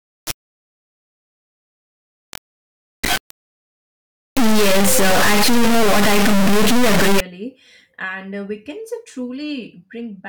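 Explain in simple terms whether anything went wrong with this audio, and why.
Something clearly went wrong for the first 7.2 seconds. From the very start until about 7.20 s, the speech turns into a harsh, blaring buzz, like a loud square wave, cutting to silence in the quietest moments. That's the classic integer read as float fault. The audio was stored as whole numbers, but the player treated those numbers as decimal values. That flips each sample between almost nothing and maximum volume. The sound points to 32-bit integer data being read as 32-bit float.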